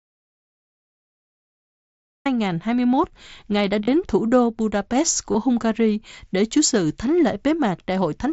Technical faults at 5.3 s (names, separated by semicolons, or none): concealed Bluetooth headset packet loss